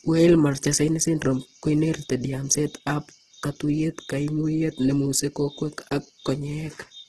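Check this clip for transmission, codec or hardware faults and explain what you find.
One codec fault runs through the whole clip: likely Opus compression, with nothing above 12.5 kHz. Starved bands are filled with folded or noise energy rather than left empty, so the speech sounds grainy and rough without MP3's swirl, pointing to a very low bitrate around 12 kbps.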